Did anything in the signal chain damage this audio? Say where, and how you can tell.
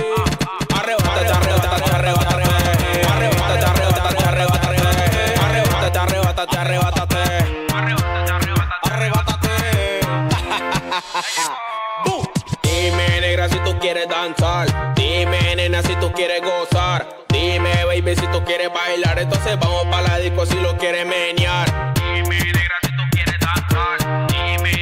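Yes, a doubled audio track runs from the start to 5.88 s. A clean copy trails roughly 300 ms behind, about 5 dB quieter, then stops abruptly. Likely a second, slower capture path.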